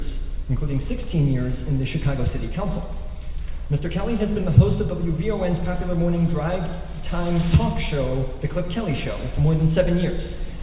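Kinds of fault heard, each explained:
No technical faults can be heard in this clip. There is nothing here that needs a separate explanation.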